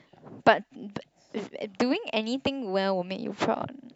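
No technical faults can be heard anywhere in this short speech recording.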